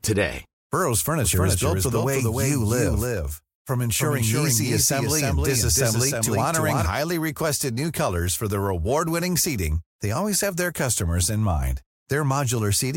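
A doubled audio track runs from 1.24 s to 6.86 s: the speech is heard twice, with a second full-band copy trailing roughly 300 ms behind and sitting somewhat quieter, around 5 dB down. The likely cause is the same signal reaching the mix a second time through a slower path. The echo has no decay or room colour, so it sounds like a flat, detached repeat, and it switches on and off abruptly at both ends.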